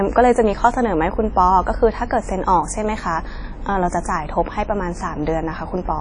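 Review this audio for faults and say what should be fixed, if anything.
The speech sounds ringing and washy throughout, with a hiss that swells and fades along with the signal and nothing above 10.1 kHz. This is likely WMA compression, with quantisation noise smeared across long transform blocks, which fits a low bitrate around 32 kbps. Keep an uncompressed or higher-bitrate source, and avoid low-bitrate WMA encoding.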